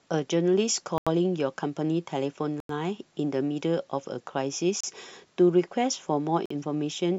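Bluetooth stall dropouts at 0.98 s, 2.60 s, 4.81 s and 6.46 s cut the speech to silence for 86, 91, 30 and 48 ms, then resume. The likely cause is interference delaying packets until the headphones' buffer ran empty.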